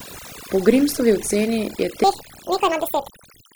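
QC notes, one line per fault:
throughout, overdone noise removal: The background drops away and breaks up into twinkling specks, and the voice's softer parts seem to flicker in and out. The noise reduction is set far too strong, pushing single frequency bands down or off whenever their level sits close to its noise estimate. Low-level parts of the speech fall inside that range, so they are stripped away along with the noise.
2.04 to 3.55 s, section at the wrong speed: From 2.04 s to the end, the voice suddenly turns high and hurried, about ten semitones above the earlier part. This final stretch plays 1.73 times faster than it was recorded, so pitch and tempo rise together rather than one changing alone. The likely cause is this section being run against the wrong clock in editing or playback, giving it a rate that doesn't match the original recording.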